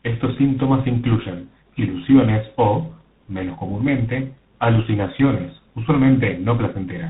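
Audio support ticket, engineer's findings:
Tandem speech coding, whole clip. Rough, muffled, warbly speech; nothing above about 3.9 kHz. The character points to a GSM full-rate leg handed through a G.711 mu-law link into G.726 at around 24 kbit/s. Two lossy speech coders in a row, and the second re-encodes the first one's artefacts, so the damage stacks.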